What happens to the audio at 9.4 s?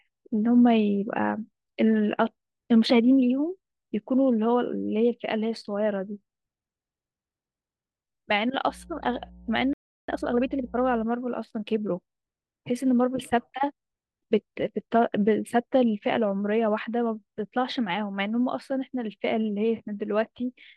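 At 9.4 s you're in the middle of a stretch of mains hum, running from about 8.69 to 11.04 s. A ground loop or nearby transformer is leaking the 60 Hz power line into the signal, giving a steady low drone roughly 25 dB under the speech.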